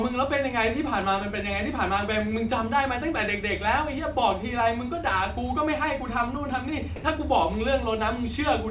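At 6.96 s the speech drops out for 80 ms, until 7.04 s. Steady soft noise fills the gap, then the sound returns. This is likely sound dropped by the voice detector, which briefly treated the speech as background. Throughout, nothing is heard above 4 kHz.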